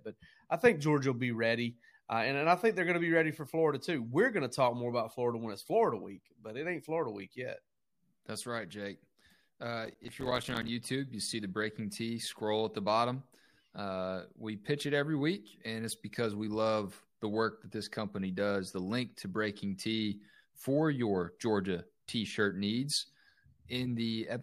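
Processor overload crackle runs from 9.86 to 10.68 s, just before "you see the". The processor kept missing deadlines on short buffers, which points to buffers of about 5 ms. Around thirty dropped to silence, leaving hard-edged gaps heard as gritty crackle over the speech.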